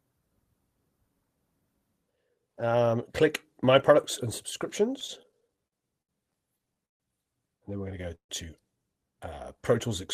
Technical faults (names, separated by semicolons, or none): repeated stalls (stutter); call audio freeze